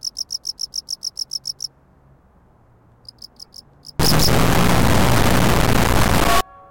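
From 3.99 s to 6.41 s the sound becomes an extremely loud, harsh buzzing square wave, dropping to silence wherever the material is very quiet. This is integer read as float: 32-bit integer samples interpreted as 32-bit float, so values land near zero or far past full scale and clip.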